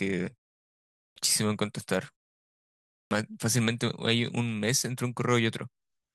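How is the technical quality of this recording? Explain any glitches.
The recording has a clipped start after a pause, twice. At 0.62 s and 2.57 s, speech bursts abruptly out of silence with about 0.54 s of its beginning missing, because the output device dozed during the preceding 0.32 s and 0.48 s pauses and hadn't woken in time.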